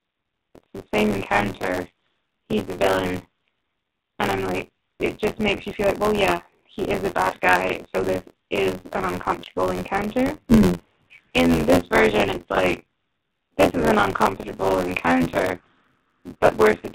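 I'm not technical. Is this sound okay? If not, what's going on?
No, it isn't. There are two problems, and both run through the whole clip.

First, the speech has been through the AMR narrowband mobile codec, the squeeze old phone networks use. Everything above 4 kHz is gone, so voices sound muffled and boxy, and with the heavy compression here they also come out noticeably buzzy and artificial, like a poor phone call.

Second, there's buffer tearing. The software feeding audio to the playback hardware has fallen out of step, so about a third of each small chunk replays sound from roughly a fiftieth of a second earlier. Those rough joins repeat about 86 times a second, giving a constant robotic rattle whenever anyone is speaking.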